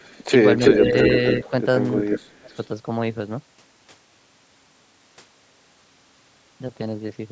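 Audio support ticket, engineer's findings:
Echo leak, likely residual echo from a far-end loudspeaker path the canceller failed to fully remove. Delayed copy of the sound returned at about 0.33 s lag. Six bursts: 0.00–0.25, 0.58–0.77, 1.00–1.05, 1.31–1.50, 1.96–2.19, 2.54–2.58 s. Level varies widely: faint at the start and at 2.54, around 5 dB louder than the speech itself at 0.58–0.77, moderate at 1.00 and 1.96. Heard as short ghost repeats.

Speech suppressed in double talk. The canceller likely could not separate near-end speech from the echo while both were present, so it attenuated both. 0.78–0.95 s: shallow dip, about 5 dB, right after the loud echo burst. 2.20–2.57 s: severe, near-dropout, around 35 dB down for roughly 0.4 s, directly following the 1.96 s echo. Audible as speech ducking and breaking up.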